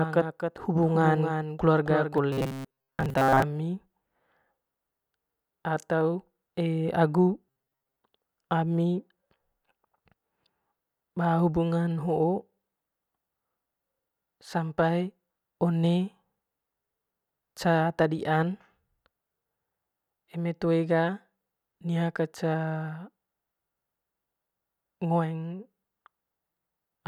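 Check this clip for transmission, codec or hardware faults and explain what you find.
Two problems show up, both in the first eight seconds of the speech.

From the very start until 2.18 s there's a doubled audio track: a second full-band copy of the voice trails the original by about 0.3 s, sitting roughly 5 dB lower. It's already running when the clip begins and cuts off abruptly at 2.18 s, with no decay or room colour on it. The likely cause is the same signal getting picked up twice, once through a slower path, so the two copies land out of step and you hear a flat, slapback-like echo.

Then there's robotic sound from repeated short buffers, from 2.32 to 3.42 s and again from 7.49 to 7.96 s. In both stretches the voice turns into a stiff metallic buzz pinned at 134 Hz, which fits a buffer of about 7.5 ms being replayed over and over. Fresh audio is likely arriving too slowly, so the last chunk gets repeated and most of the real audio is skipped. 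The buzz follows the original speech only roughly.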